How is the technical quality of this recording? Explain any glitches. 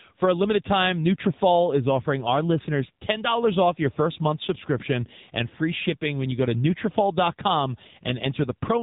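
Quality is poor throughout, all down to one problem. The speech has been through an AMR narrowband mobile codec from start to finish. Nothing above 3.8 kHz survives, and the heavy buzzy, synthetic edge fits a low bitrate around 6.7 kbps, where a handful of pulses per 5 ms driving a vocal-tract model can't capture the real voice.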